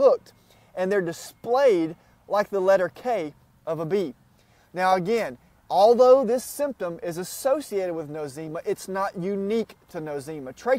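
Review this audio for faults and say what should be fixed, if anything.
Nothing in this audio needs fixing, as no faults can be heard.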